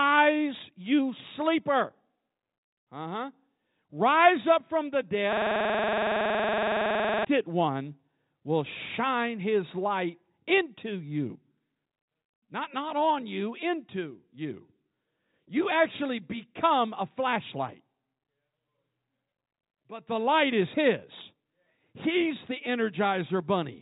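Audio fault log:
5.33–7.25 s, system hang loop: after "up from the", one 46 ms slice of audio repeats exactly 41 times at 21.5 Hz, which fits a 2048-sample buffer. The sound card kept replaying its ring buffer while the system froze, until "one will shine his". Unlike a dropout or a glitch in the 3.8 kHz-limited telephone coding, each repeat is identical.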